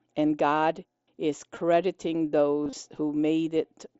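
At 1.55 s and again across 2.64 to 2.73 s, concealed Bluetooth headset packet loss: the second turns briefly buzzy where the receiver repeats recent waveform.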